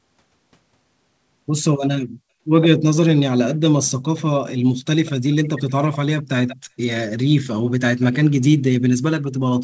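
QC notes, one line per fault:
5.05–5.12 s, 5.68–5.72 s, 6.47–6.56 s, 8.0–8.05 s, 9.24–9.29 s: echo leak. Brief, faint scraps of the speech return about 186 ms late, some 20 to 35 dB down, likely from a far-end loudspeaker whose echo canceller let them through. On a spectrogram they show as weak repeated harmonic traces, capped at 8 kHz like the rest of the band.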